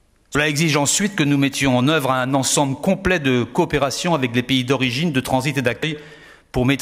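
Compressed frames are skipped twice, from 0.26 to 0.35 s and again at 5.83 s. Each time, about a tenth of a second of audio never plays. The sound jumps forward.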